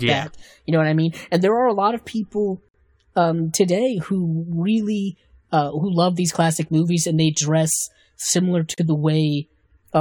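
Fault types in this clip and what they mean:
Gap at a join of encoded pieces: at 2.69 to 2.74 s and 8.74 to 8.78 s the speech drops into silence, for about 57 ms and then 37 ms, before resuming exactly where it stopped. The gaps fall six seconds apart, pointing to separately encoded pieces joined untrimmed, so each encoder's start-up delay and final-frame padding stay in. Their edges are smeared by the codec.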